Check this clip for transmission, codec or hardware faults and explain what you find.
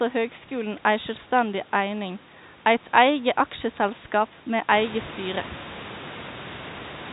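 No transmission, codec or hardware faults can be heard in this speech. The sound is limited to the telephone band, with nothing above 4 kHz, as G.711 coding gives, and the room noise behind the speech grows by about 13 dB around four and a half seconds in, staying about 16 dB below the speech.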